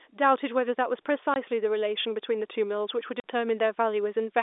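Speech over a narrowband telephone line shows packet loss filled with silence: dead gaps at 1.34–1.36 s and 3.20–3.24 s, lasting 20 and 40 ms, which fits lost 20 ms packets. Unlike smoothed concealment or a fade, each gap begins and ends abruptly.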